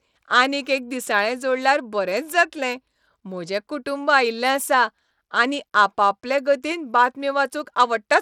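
Bluetooth SBC compression runs through this speech clip from start to finish, and its damage is plainly audible throughout, with nothing present above 20.9 kHz. The cause is likely an SBC link, and the degree of damage fits a bitrate around 96 kbps. SBC splits the signal into a few wide sub-bands and shares bits out with a simple rule rather than a model of hearing, so when bits are scarce each band is coarsely quantised.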